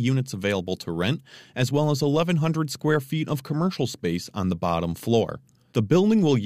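Speech recording with no audible technical faults anywhere.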